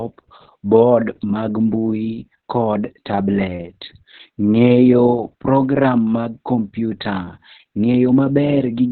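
Right from the start and all the way through, this speech has heavy Opus voice compression damage. Nothing comes through above about 4.2 kHz, so it's narrowband and muffled, and the coarse SILK excitation makes it hoarse and a bit robotic, which fits a very low bitrate around 6 kbps.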